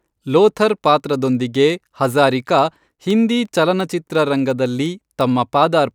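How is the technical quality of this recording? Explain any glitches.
The recording is marred by a steady run of sharp, uneven clicks from 0.30 s to 5.91 s, around fifteen in all, roughly every 0.4 s. These are word clock ticks: the receiving device's clock drifts against the sender's by around 70 parts per million, forcing a single-sample slip at each crossing.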